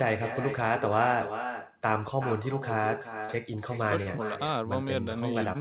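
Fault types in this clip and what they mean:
Echo with no canceller: the far end is playing the call out loud, its mic picks that back up, and nothing scrubs it out. So the talker's voice comes back roughly 0.4 s later, about 9 dB quieter and thinner than the original. It shadows the whole clip like a ghost trailing each phrase, and the call runs narrowband with nothing above 4 kHz.
Short concealed packet loss: three times, a few hundredths of a second of audio didn't reach the decoder in time, and the receiver papered over each hole by carrying the last bit of sound forward before blending back into the real signal. You catch them at 3.25 s, 4.03 s and 5.53 s as brief smears or little wobbles, each about 50 to 60 ms long. The middle one also shifts the timing by around 20 ms, and the last one stretches things by a few milliseconds.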